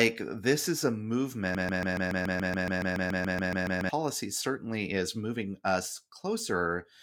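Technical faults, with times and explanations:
1.55–3.89 s, broken-record loop: a fragment of about 0.14 s repeats exactly, back to back, 17 times, giving a rapid mechanical stutter that lasts a little over two seconds. The identical repetition points to a stall upstream, most likely in the player, encoder or stream, which kept resending the last chunk it held instead of new audio. Whatever speech should have played across that stretch is missing, and the clip resumes directly after the loop ends.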